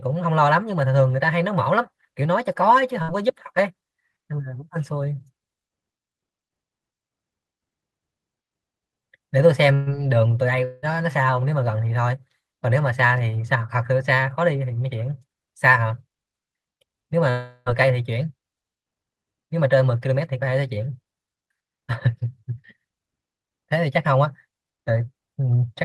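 Burst of packet loss at 3.02 to 3.11 s: a short run of packets went missing, and the receiver bridged the gap by continuing the last sound for about 60 ms while turning it down. The speech briefly smears into a fading buzz or hiss, then picks up slightly further along. The same happens at 9.74 to 9.89 s, where the concealed stretch lasts about 120 ms, so the smear is longer.

Long network dropout at 10.64 to 10.85 s: the stream stops for about 180 ms, likely because audio stopped arriving over the network. The receiver fills the whole gap with a held, decaying continuation of the preceding sound, with no silence, and speech resumes past the lost portion. At 17.30 to 17.69 s a longer dropout of about 360 ms gives the same stretched, fading fill before the speech jumps ahead. Throughout, the speech is band-limited to about 12 kHz, which fits Opus at around 32 kbps.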